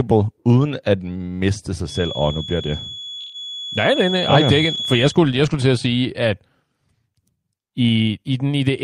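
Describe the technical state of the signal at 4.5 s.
At 4.5 s a feedback whistle is present, running from 1.83 to 5.19 s: a thin, steady 3.4 kHz tone sitting roughly 10 dB under the speech, likely a speaker-to-microphone loop held just short of runaway. A spectrogram shows one flat horizontal line at 3.4 kHz, slowly wavering in brightness.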